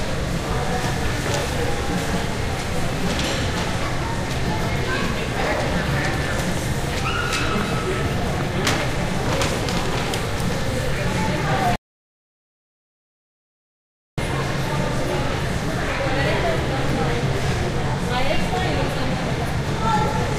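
A recording of everyday sounds with an audio dropout to silence. At 11.76 s the sound cuts off abruptly, and it returns at 14.18 s. The 2.42 s gap is silent with no room tone. The input was likely lost while recording continued.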